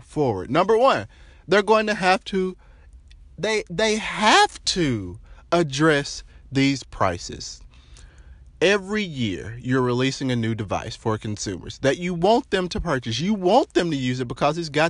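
No technical faults can be heard anywhere in the recording.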